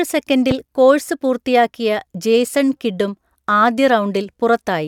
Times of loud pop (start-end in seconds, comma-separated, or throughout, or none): 0.51-0.54